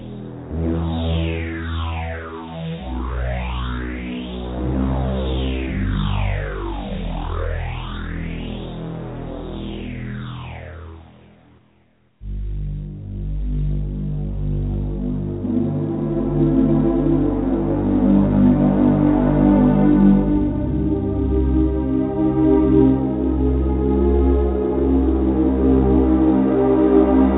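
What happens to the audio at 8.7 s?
At 8.7 s the audio passes through intact, with nothing breaking into it beyond the narrow, telephone-like band of the call path, which carries nothing above 4 kHz.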